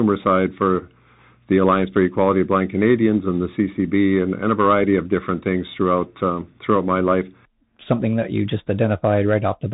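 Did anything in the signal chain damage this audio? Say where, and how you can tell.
Yes, at the codec stage, throughout: the Bluetooth CVSD headset codec. Nothing passes above 3.8 kHz, so a spectrogram shows a hard ceiling there over a grainy noise floor. Its one-bit, adaptive-step coding, consistent with a 64 kbit/s stream, lags loud high sounds, leaving s sounds scratchy.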